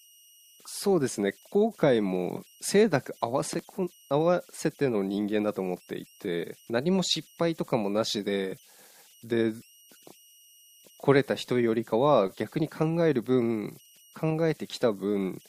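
Speech throughout, with converter idle tones running the whole length: a faint whistle somewhere around 3 kHz that shows up in the pauses, and a grainy texture under the quieter stretches, sitting about 32 dB below the signal. That's a delta-sigma converter without dither settling into repeating bit patterns on low-level input.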